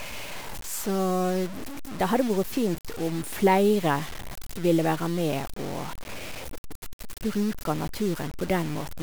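Low bit depth without dither runs throughout: the speech sounds grainy, with distortion about 15 dB down, likely from truncation to roughly five bits with no dither.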